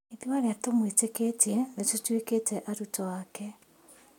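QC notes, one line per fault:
No faults heard.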